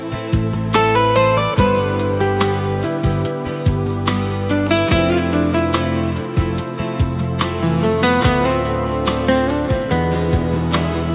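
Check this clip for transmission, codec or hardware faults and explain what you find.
No transmission, codec or hardware faults turn up; the audio stops at 4 kHz, which fits the narrowband telephone codec of an ordinary call path rather than a defect.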